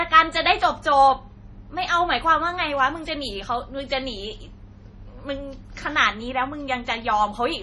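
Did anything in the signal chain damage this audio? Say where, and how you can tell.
Yes, at the codec stage. Across the whole speech clip nothing sounds above 11.3 kHz, and the heavy watery swirl with smeared consonant attacks points to MP3 compression, likely at a low bitrate around 32 kbps, where the encoder cuts treble and drops weak spectral lines frame by frame.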